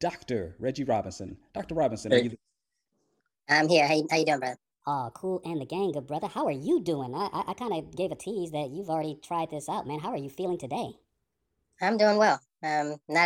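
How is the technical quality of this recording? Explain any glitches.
The recording has one clear fault. From 3.33 s to the end, a section at the wrong speed plays 1.34 times fast, raising the speech about five semitones, likely from a clock mismatch. On a spectrogram, harmonics jump upward there and syllables compress in time.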